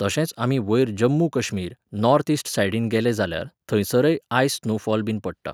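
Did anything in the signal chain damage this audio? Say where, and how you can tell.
No, nothing in this speech shows signal-chain damage.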